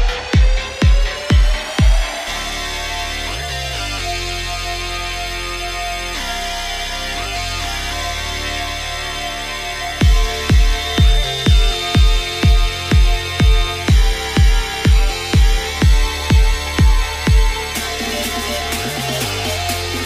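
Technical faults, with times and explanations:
10.68 to 13.85 s, feedback whistle. A thin, steady tone near 3.6 kHz sits behind the sound, roughly 15 dB below it, swelling and fading slowly in level. The likely cause is a loudspeaker-to-microphone loop held just at the edge of feedback, ringing without building up.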